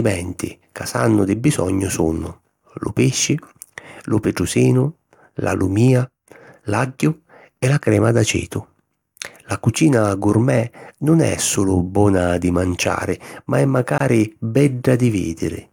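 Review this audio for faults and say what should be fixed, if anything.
A gap at a join of encoded pieces silences the speech from 13.98 to 14.00 s, 24 ms. The pieces were joined without trimming encoder delay and end padding. The waveform shows a notch with smeared edges, and the spectrogram a thin blank vertical stripe. Trim each piece's delay and padding before joining.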